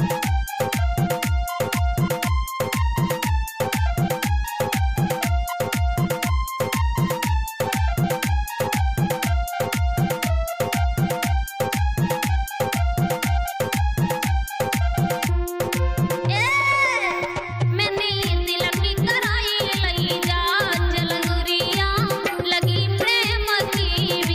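Nothing is technically wrong with this clip.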